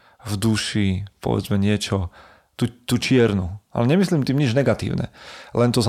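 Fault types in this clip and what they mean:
There are no fault types in this speech clip.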